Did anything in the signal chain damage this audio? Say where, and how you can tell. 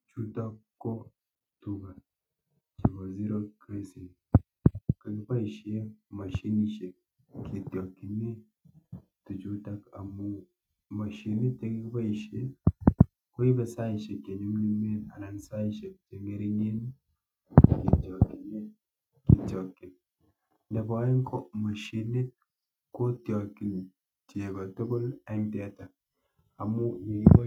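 No. Nothing in the chain audibly damaged this speech.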